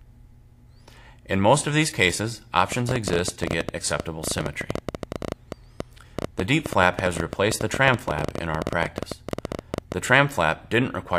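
From 2.72 s to 9.93 s there's a train of clicks running over everything, around 11.5 a second but unevenly spaced, so it ticks and stutters rather than keeping a steady beat. That adds up to roughly a hundred pops, each much the same shape and poking out well above the sound, something like 10 dB over it. The likely culprit is interference from nearby gear or a faulty connection or power supply, injecting a pulse over and over.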